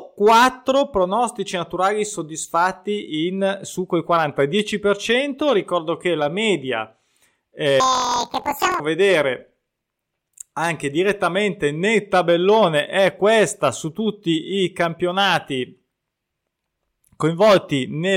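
From 7.80 to 8.80 s the speech jumps an octave high with a rapid flutter, the signature of planar audio read as interleaved. Each block of about 23.2 ms, which fits a 1024-sample block, plays twice at double speed, first left then right, giving a 43.1 Hz flutter.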